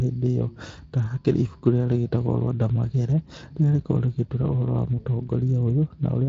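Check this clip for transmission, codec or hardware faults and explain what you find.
Nothing jumps out here: I can't hear any transmission, codec or hardware fault in this speech, which simply tops out at around 7.6 kHz, as its encoding would lead you to expect.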